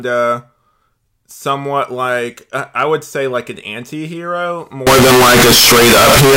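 At 4.87 s the audio most likely begins to be misread as float read as integer: 32-bit floating-point samples are interpreted as 32-bit integers, so each sample's sign and exponent bits, not its true amplitude, set the output level. From there to the end the speech turns into a harsh, nearly square wave sitting at an almost fixed, high level, far louder than before, with background noise as loud as the speech, though pitch still comes through.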